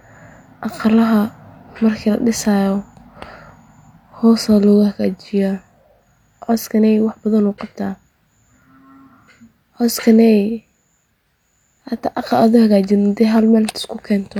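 No technical faults are audible.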